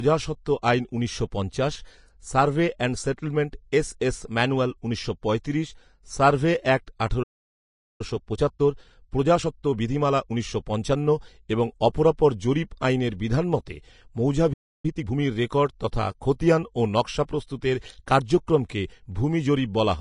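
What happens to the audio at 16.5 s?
At 16.5 s, as across the whole clip, the speech is hissy and grainy with a lowered treble cut-off, likely low-bitrate Vorbis compression quantising the treble into noise.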